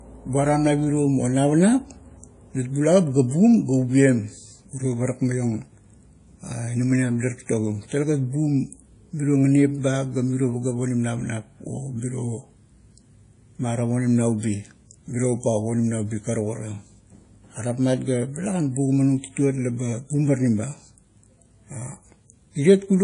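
WMA compression, the likely cause, runs throughout this speech: plainly audible ringing, washy noise smeared across long blocks, nothing above 10.1 kHz, fitting about 32 kbps.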